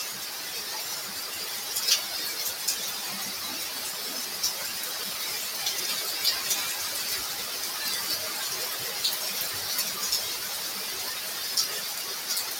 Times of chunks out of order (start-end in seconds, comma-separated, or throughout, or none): 4.86-5.03, 5.76-5.85, 7.30-7.42